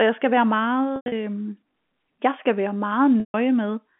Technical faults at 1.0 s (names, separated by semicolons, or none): packet loss with pitch repetition